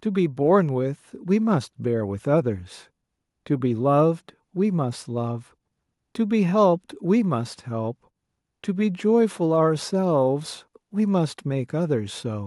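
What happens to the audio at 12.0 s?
At 12.0 s the speech carries on without any audible fault.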